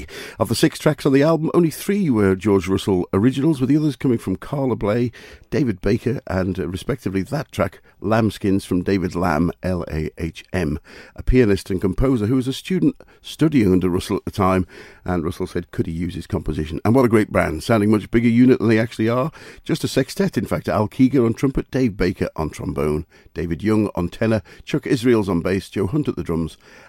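Listening through this speech recording, nothing stood out as a technical problem at any point.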